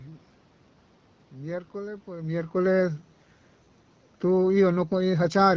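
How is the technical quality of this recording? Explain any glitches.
No glitches can be heard in this speech recording. The change in loudness around 2 s comes from the talker shifting position at the microphone, and the sound carries the band-limited top of wideband call audio at 12.65 kbit/s.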